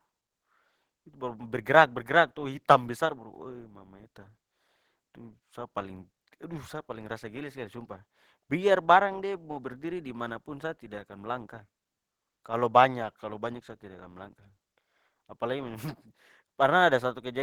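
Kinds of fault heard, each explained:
Nothing stood out as a fault on listening to this recording.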